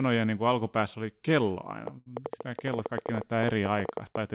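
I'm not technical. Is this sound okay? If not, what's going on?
No, there are three problems, all starting just before the middle of the speech.

From 1.87 s to the end there's a train of clicks, roughly ten a second at an uneven pace, ticking over the speech and the pauses, likely from electrical interference or a faulty connection.

At 1.98 to 2.08 s there's a short stall from a late packet: a chunk of the call arrived late, so the receiver held the last sound for about 80 ms, and nothing was lost.

Right after, at 2.14 to 2.17 s, there's a short concealed packet loss: about 20 ms never arrived, and the receiver papered over it, leaving a tiny smear or wobble.

The dull, phone-like tone, with nothing above 4 kHz, is just the call system working as designed.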